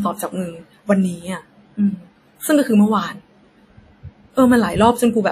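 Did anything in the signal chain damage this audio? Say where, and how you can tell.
Yes, at the codec stage. Throughout the speech there is a ringing, washy smear and a hiss that swells and falls with the voice, and nothing at all sits above 16.3 kHz. That points to WMA compression, likely an early WMA encoder at a low rate in the region of 48 kbps. Its long transform blocks spread quantisation noise over tens of milliseconds, zero out weaker spectral lines, and discard everything above the cutoff.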